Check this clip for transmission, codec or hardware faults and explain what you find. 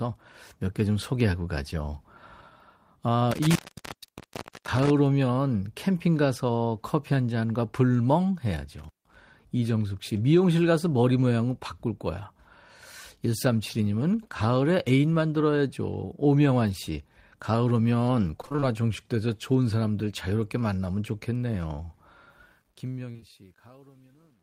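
Four kinds of fault are audible: two contact dropouts, a burst of robotic packet loss, truncation distortion on the closing fade, and three short concealed losses inside that fade.

Intermittent contact occurs at 3.31–4.90 s, with the line open for about 1.1 s, and again at 8.79–9.16 s, open for about 0.16 s. A loose plug or cable breaks the signal path, so the speech cuts out with crackle at each edge and only faint hiss remains during the gap.

Repeated packet loss (robotic sound) runs from 18.41 to 18.64 s. A rapid series of short gaps, none longer than about 21 ms, is each patched by extending the preceding sound. Nearly half the span is synthetic, giving a choppy, robotic texture with fragments missing.

Truncation distortion on a fade spans 22.30 s to the end. The smooth fade-out beginning around 22.30 s is rendered without dither at a word length that fits roughly 10-bit resolution. 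As the level approaches the smallest step, the waveform coarsens into steps, becoming gritty, worst from 23.25 s.

Short concealed packet loss appears three times in succession: 23.12–23.17 s, 23.17–23.20 s and 23.20–23.24 s, each covering about 20 ms of missing audio. The decoder fills each hole by continuing the last sound and then blends back, heard as brief smears or wobbles within the fading speech.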